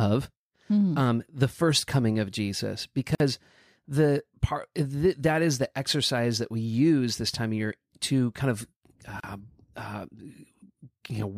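A speech clip in which the sound drops out twice in brief gaps: about 50 ms from 3.15 to 3.2 s, and about 34 ms from 9.2 to 9.24 s. Each hole has smeared edges, and the speech picks up exactly where it broke off. The six-second spacing points to a gap at a join of encoded pieces, where separately encoded segments were joined without trimming the encoder's leading delay and final-frame padding.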